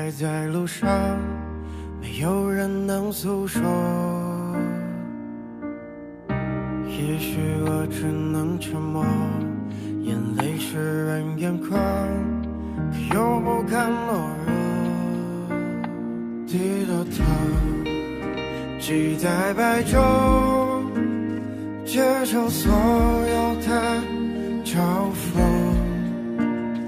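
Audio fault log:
No faults can be heard anywhere in the audio. There is nothing to log for any part of it.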